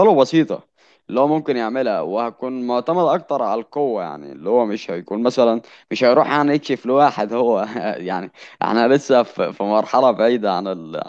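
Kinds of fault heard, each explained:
No technical faults are audible anywhere in the recording.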